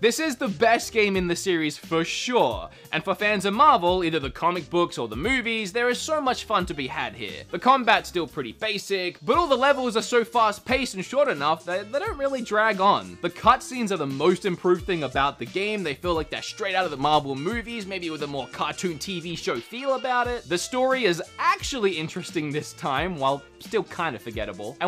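Nothing is technically wrong with this clip.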